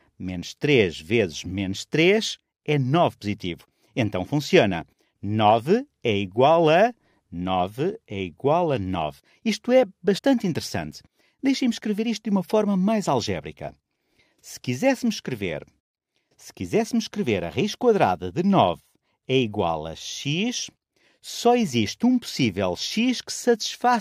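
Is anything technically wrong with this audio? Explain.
Yes, there are two cases of compressed frames skipped, at 10.17 to 10.19 s and 17.23 to 17.25 s. The decoder dropped whole frames, jumping ahead about 70 ms at the first point and about 20 ms at the second, which fits roughly three and one 23.2 ms frames. Each join is heard as a brief jump where the audio skips ahead.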